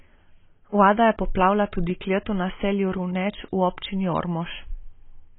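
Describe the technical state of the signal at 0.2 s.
At 0.2 s the speech sounds dull and smeared, with nothing above about 3.8 kHz and a watery, warbling texture where sibilance should be. This persists throughout the clip, not just at that moment. The likely cause is AAC compression. At a rate consistent with roughly 16 kbps, AAC-LC lowers its cut-off and quantises each frame's frequency lines so coarsely that high bands are lost and the remainder smears.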